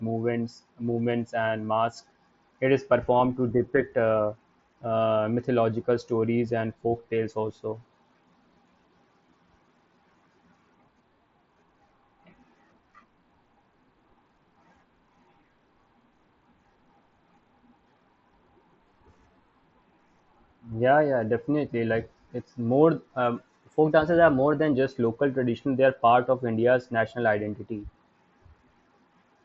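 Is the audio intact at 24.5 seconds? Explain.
No. A drift correction step runs from 23.37 to 24.73 s: clock-matching software likely shifted the playback rate in one jump, so the speech plays about 5.8% fast and roughly 97 cents sharp, nearly a semitone, before snapping back.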